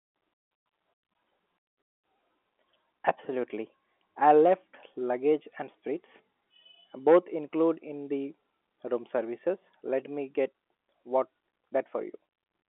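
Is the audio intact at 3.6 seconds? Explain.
Yes, the audio is intact at 3.6 seconds, with nothing there beyond the ordinary narrow band of G.711 telephone coding, which lets nothing through above about 3.8 kHz.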